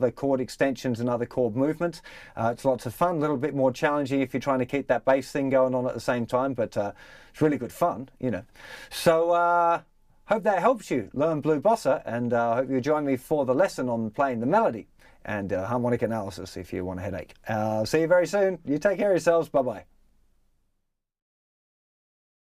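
No technical fault can be heard anywhere in this audio, and the signal stays steady and intact throughout.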